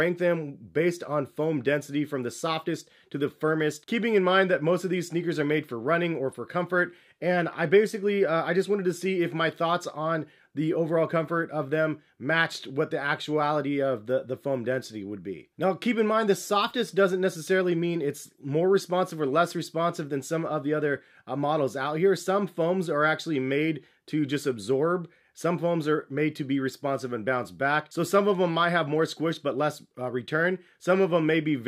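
Nothing stood out as a technical problem on listening to this clip.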